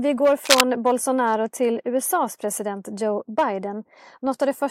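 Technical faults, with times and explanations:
0.45–0.61 s, cable scratch noise: right after "vi går", a dense, uneven rustling burst rises above the speech, likely from a worn connector shifting, rather than isolated separate clicks.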